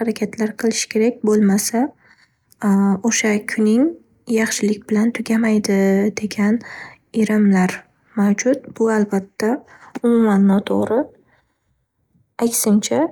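No dropouts, clipping, glitches or other technical faults turn up anywhere in this speech recording.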